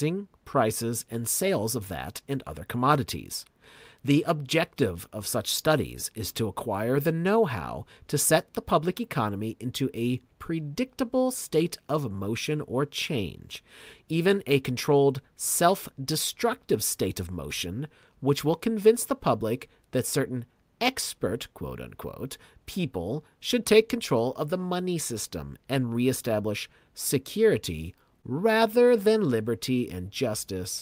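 Right near the end, from about 28.21 to 28.25 s, there's a short concealed packet loss. Roughly 20 ms of the speech never made it to the decoder in time, and the receiver patched over the hole, extending what it last had for about 14 ms before blending back into the real signal. You hear it as a tiny smear or wobble in the voice.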